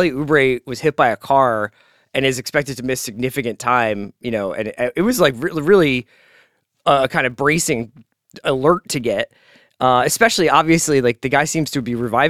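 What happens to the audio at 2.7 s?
At 2.7 s you're hearing the filter restarted on every block, which runs through the whole speech clip: each block starts from silence, leaving a 200 Hz buzz that tracks the level.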